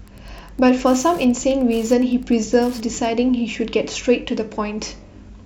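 A nearby Wi-Fi radio's beacon, rectified by the audio circuit, causes Wi-Fi interference from 0 to 3.13 s: steady ticking every 102.4 ms, roughly 30 dB below the speech.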